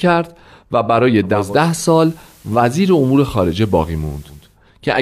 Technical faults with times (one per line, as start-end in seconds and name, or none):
1.22-4.59 digital radio blending to analogue